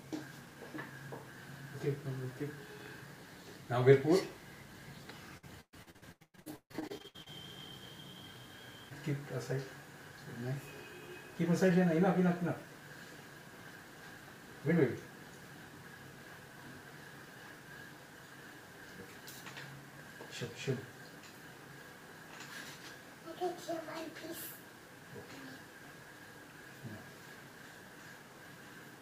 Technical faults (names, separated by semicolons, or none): low bit depth without dither; repeated packet loss (robotic sound)